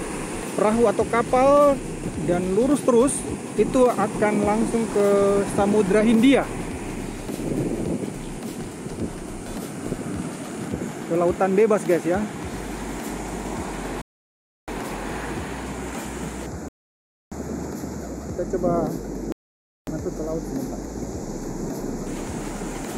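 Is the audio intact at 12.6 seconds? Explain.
Yes, at 12.6 seconds the audio plays through intact, with no dropout, glitch, distortion or other fault at that point.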